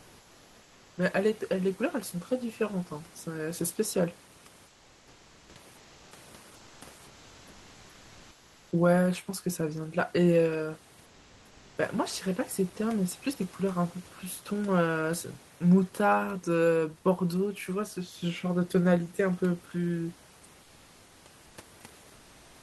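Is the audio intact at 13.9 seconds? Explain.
Yes, the audio is intact at 13.9 seconds, with only the room's own background noise sitting about 28 dB below the speech.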